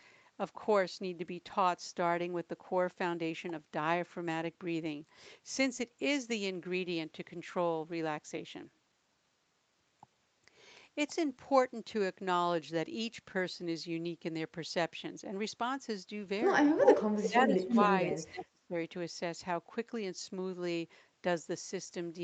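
A speech recording, band-limited to 8 kHz by its call path, with trouble concentrated between 17.2 and 18.8 s. An echo leak appears three times: at 17.23 to 17.28 s, 17.69 to 17.84 s and 18.10 to 18.19 s, a copy of the speech returns about 305 ms late, at roughly 5 dB below the live speech, then at about the same level, then about 10 dB down. This is likely a far-end loudspeaker feeding its microphone, with the echo canceller failing to cancel all of it and passing the residue back. Speech suppressed in double talk overlaps the echoes: from 17.27 to 17.89 s the speech dips by up to about 15 dB over roughly 0.4 s in total, and from 18.21 to 18.75 s it drops by up to about 30 dB across about half a second, nearly cutting out. Both sides talking at once likely left the canceller unable to separate local speech from echo, so it attenuated both.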